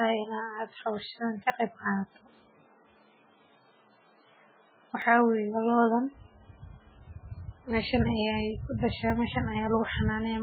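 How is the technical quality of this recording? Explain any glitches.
The recording is poor. Heavy compression runs through the whole speech clip, and three brief skips interrupt it.

Throughout, the speech sounds watery and swirly. That is likely MP3 compression starved of bits, near 8 kbps. A spectrogram shows a flat ceiling and patchy, flickering energy below it.

At 1.5 s, 5.02 s and 9.1 s, the sound jumps suddenly where a short stretch is missing, the last one longer. The likely cause is a dropped buffer (overrun), with the surrounding audio spliced directly together. The waveform shows abrupt discontinuities, not gaps.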